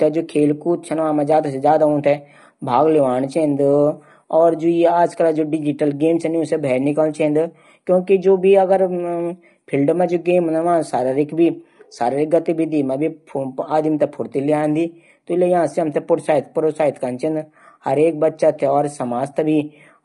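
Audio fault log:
Throughout, low-delay AAC compression: the speech has a rough, grainy texture across the whole clip, with a hiss filling the gaps between the harmonics and an upper band that sounds thinned and somewhat synthetic. The likely cause is AAC-ELD coding at a rate that fits 32 kbps, where frames of only about 10 ms are coded with a low-delay window, and at this bitrate the bits run short and quantisation noise spreads between the harmonics.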